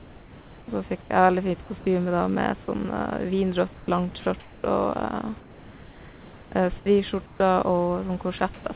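Speech, carried over a call path with nothing above 4 kHz, which fits a narrowband G.711 codec. Comfort noise in place of the background occurs at 0 to 0.68 s, 3.74 to 3.88 s, 5.4 to 6.52 s and 7.26 to 7.4 s. There the real room sound becomes a steady, featureless hiss, about 2 to 4 dB quieter, likely synthetic fill during discontinuous transmission. At 1.02 to 1.1 s, sound is dropped by the voice detector. About 30 ms of speech gives way to steady noise, likely because the detector took it for background. Sound chopped by the voice detector occurs at 4.2 to 4.64 s and 8.38 to 8.66 s. Speech cuts in and out, likely from the detector switching repeatedly.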